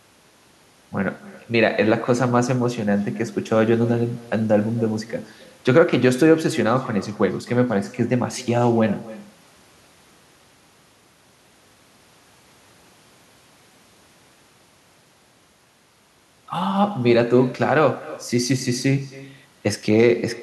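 Throughout the speech, echo with no canceller: the far end's loudspeaker feeds its microphone, returning each phrase about a third of a second later, about 19 dB down, and thin.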